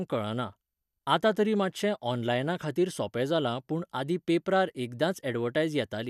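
No audible technical faults.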